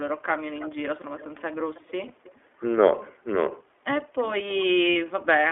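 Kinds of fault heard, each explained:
iLBC codec: A narrowband VoIP codec coded each 20 ms frame independently, so the speech is confined to 300 Hz to 3.4 kHz and sounds plainly rough and synthetic throughout.
echo leak: A far-end loudspeaker's echo canceller likely let its microphone pickup return, so faint copies of the speech arrive 321 ms late, about 20 to 30 dB down.
lost iLBC frames: Dropped packets forced the decoder to repeat the last pitch cycle with noise, giving brief held buzzy vowels of 20 ms and 60 ms, with the speech right again almost at once.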